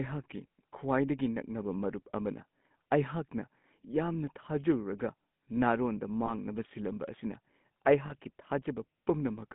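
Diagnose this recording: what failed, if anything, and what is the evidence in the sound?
Codec stage: the GSM full-rate codec leaves the speech buzzy and gravelly within 150 Hz to 3.6 kHz, rougher than plain telephone filtering, consistent with a 13 kbps codec.

Network stage: lost GSM frames at 6.26–6.32 s and 8.06–8.16 s, where the last good frame repeats as a metallic ring rather than a silent dropout.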